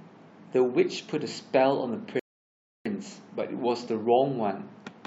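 At 2.20 s the speech drops abruptly into silence, then picks up at 2.86 s exactly where it broke off, with nothing skipped. That is a rebuffering stall: the player exhausted its downloaded audio and paused until more arrived, adding about 0.66 s.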